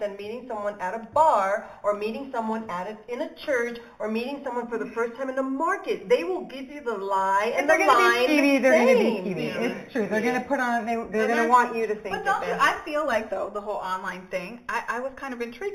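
Right through the clip there's imaging from linear upsampling. The sound points to an 8 kHz rate raised to 48 kHz by straight-line interpolation, which dulls the top and leaves a faint mirror image between 4 and 8 kHz, some 25 dB down, heard as metallic shimmer.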